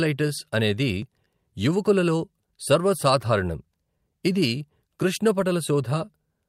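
Throughout the clip there is clock drift between sender and receiver. The sending clock runs about 2% slow, so audio arrives a little more slowly than the receiver plays it out, and its buffer keeps drifting toward empty. Unlike network jitter, which comes and goes, this pressure is steady and always pushes the same way, leaving the timing faintly uneven from start to finish rather than broken by isolated glitches.

From 0.28 s to 6.18 s the receiver answers with repeated timing corrections, repeating short slivers of the speech to fill the gap, so the clip plays at roughly 98% of its proper pace. The repeats add up to around 150 ms of extra length. Each edit is tiny and heard only as a slight hiccup or a faintly unsteady rhythm. What sets this apart from packet-loss concealment is that nothing is muted or smeared, and every correction lengthens the audio, unevenly spaced but always in the same direction.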